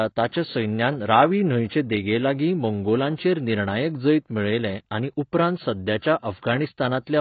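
Throughout the speech, nothing is heard above 4.6 kHz, and sibilants sound dull, smeared and warbly. This is likely heavy AAC compression, fitting a bitrate near 16 kbps.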